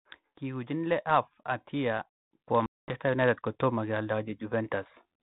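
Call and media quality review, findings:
Automatic gain rising, 0.39 to 4.8 s: speech and background swell together by about 11 dB over roughly four seconds. AGC stage raising gain on quiet input.

Packet loss on the ADPCM call, 2.66 to 2.96 s: hard-edged 220 ms silence. The length fits roughly ten lost packets. The speech resumes slightly distorted while the ADPCM predictor and step size resynchronise. The codec's light coding damage and band limit below 4 kHz are consistent with 32 kbit/s G.726.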